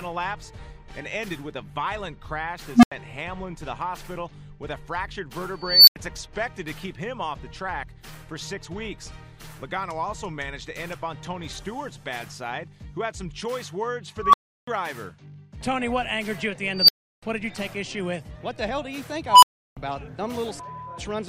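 An unstable filter, a recursive filter with bad coefficients running away, strikes at 2.74, 5.61, 14.19, 16.73 and 19.29 s. Tones near 200 Hz, 5 kHz, 1 kHz, 5 kHz and 1 kHz swell over 90 to 270 ms into clipped squeals, then cut to silence for 85 or 341 ms. The waveform shows a widening envelope that clips flat, then a flat gap. The spectrogram shows a bright horizontal line that ends abruptly.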